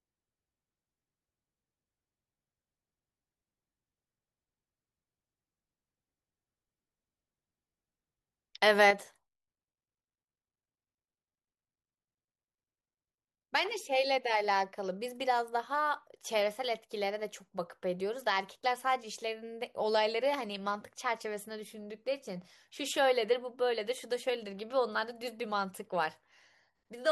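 At 8.91 s the speech abruptly drops by about 6 dB and stays quieter to the end. This is likely one channel dropping out, leaving only the surviving channel's half of the mono sum.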